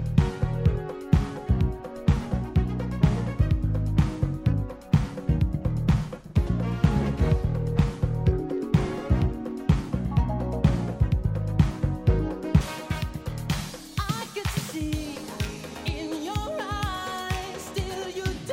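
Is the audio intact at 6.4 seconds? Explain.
No. At 6.4 seconds the sound is dull and muffled, with the top end rolled away so that detail and air are missing. This is de-emphasis applied wrongly, present from the start through 12.61 s. A treble-cut filter intended to reverse pre-emphasis has acted on audio that never carried any boost, or has been applied a second time, so the response falls smoothly with frequency, about 11 dB down at 10 kHz relative to 1 kHz.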